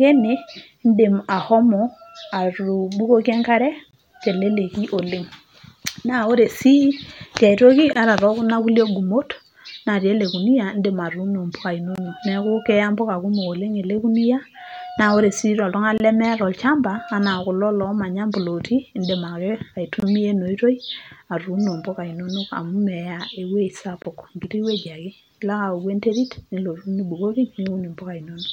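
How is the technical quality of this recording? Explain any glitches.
The speech carries a recurring gap at a join of encoded pieces. Short silences of about 23 ms open at 3.91, 7.93, 11.96, 15.98 (right after "sii toltungani"), 20.00 (just before "ena oitoi") and 24.02 s, one every 4.0 s. Each piece was encoded separately and joined untrimmed, so encoder start-up delay and last-frame padding remain as a hole with smeared edges. Unlike random dropouts, these gaps are nearly identically sized, strictly periodic, and the speech resumes exactly where it stopped.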